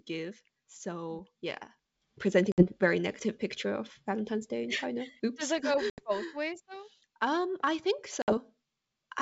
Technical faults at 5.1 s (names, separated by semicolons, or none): none